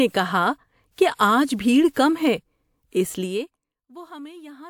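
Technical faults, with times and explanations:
1.15–1.19 s, pre-echo: a 42 ms hiss runs ahead of a sharp attack in the speech, and the attack itself sounds soft and smeared. The transform codec spread its quantisation noise across the whole block, so noise sized for the loud onset also fills the quiet moment just before it.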